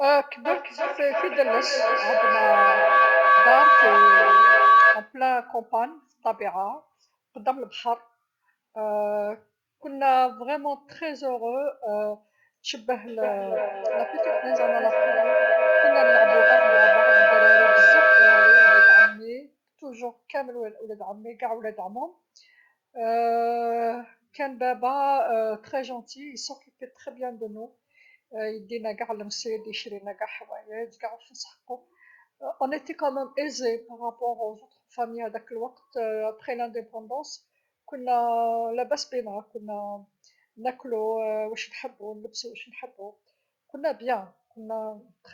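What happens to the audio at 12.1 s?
Nothing goes wrong at 12.1 s: the speech carries on intact through that moment, with no dropout, click or other audible fault.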